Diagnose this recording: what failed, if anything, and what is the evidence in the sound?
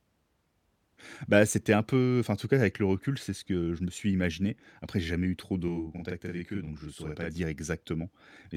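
Channel delay doubling at the buffer stage, 5.68 to 7.36 s, after "j'ai jamais eu trop". One channel runs 40 ms late. Summed to mono, the speech doubles.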